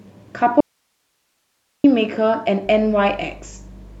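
At 0.61 s the speech cuts off abruptly and returns at 1.84 s, an audio dropout to a faint residue lasting about 1.24 s. Only hiss remains, roughly 50 dB below the speech, likely from a live path that lost its signal. Unlike a pause or fade, the edges are sudden.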